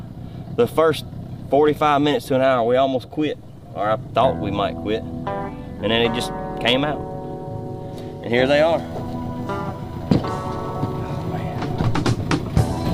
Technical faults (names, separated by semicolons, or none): USB whine